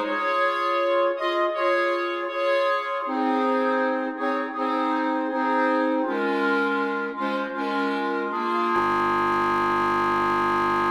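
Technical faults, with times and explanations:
8.76 s to the end, system hang loop: the sound gives way to a steady 50 Hz buzz that continues until the end. A single 20 ms slice repeats over a hundred times as the hardware keeps replaying one ring buffer after the system froze, which fits a 20 ms buffer.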